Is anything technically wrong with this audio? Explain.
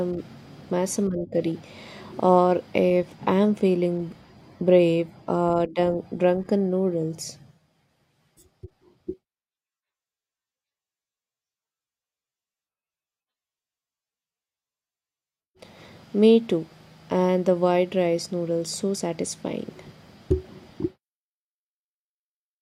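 No, nothing technical stands out here; it's just speech with no faults to point to anywhere along the way.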